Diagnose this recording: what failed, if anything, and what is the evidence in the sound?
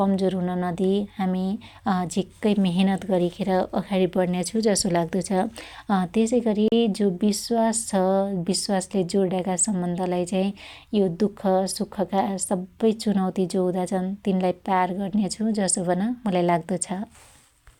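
The speech drops out at 6.68 s for about 38 ms, going to full silence, then resumes at 6.72 s on "जो बिश्वास". A gap this short, with no fade, hiss or repeated fragment, points to the wireless playback link. The likely cause is a Bluetooth stall: interference delayed packets, the headphone buffer emptied, and output halted until retransmissions arrived. The waveform shows a flat silent gap with abrupt edges, and the spectrogram shows a clean vertical blank band across all frequencies.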